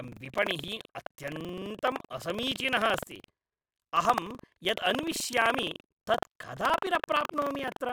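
Speech runs through the whole clip with buffer tearing. A robotic rattle at about 23.4 Hz rides on the audio wherever there is signal, which fits a 2048-sample buffer. Roughly a tenth of each buffer repeats sound from about 100 ms earlier, with hard joins.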